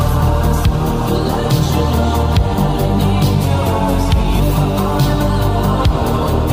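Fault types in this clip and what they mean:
Drift correction step: from 3.44 to 4.41 s the sound slows by about 6 percent and falls 110 cents, just over a semitone, before snapping back. This is likely clock-matching software changing the playback rate in one step to rebalance its buffer.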